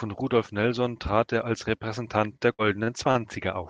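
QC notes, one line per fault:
2.53–3.20 s, repeated packet loss (robotic sound): across this span packets were lost or late again and again, with four separate holes in the packet stream, the longest about 52 ms. Each hole was papered over by extending the preceding sound, so roughly a fifth of the stretch is concealment rather than real signal. The patched pieces carry on the last sound while short bits are simply gone, giving a choppy, robotic texture on an otherwise band-limited Opus call path.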